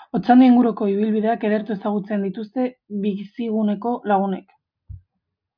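No technical faults can be heard anywhere in this recording.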